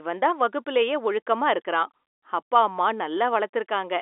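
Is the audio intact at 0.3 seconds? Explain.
Yes, the audio is intact at 0.3 seconds: the speech comes through the G.711 telephone coding, limited to the narrow phone-line band with nothing above about 3.8 kHz, and no fault touches that moment.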